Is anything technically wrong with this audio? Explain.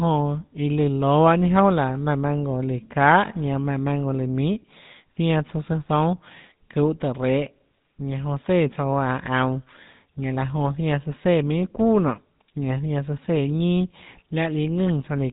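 Yes. GSM full-rate codec damage runs through the whole speech clip. The codec models the vocal tract and drives it with sparse, regularly spaced pulses, at a rate that fits 13 kbps. Nothing above 4 kHz survives. The speech sounds plainly buzzy, gravelly and muffled.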